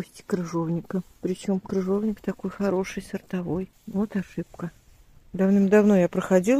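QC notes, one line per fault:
No faults heard; nothing to log.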